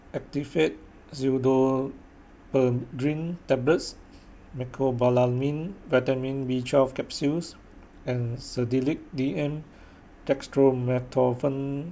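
No technical faults are audible anywhere in the recording.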